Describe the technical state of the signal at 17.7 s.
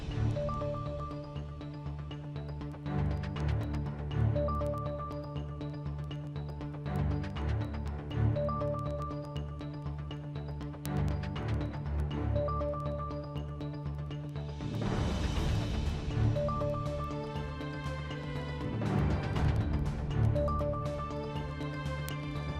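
Word clock ticks run through 17.7 s, spanning 0.20 to 22.54 s. Unlocked clocks, roughly 200 ppm apart, slip one sample about every tenth of a second, producing steady sharp ticks.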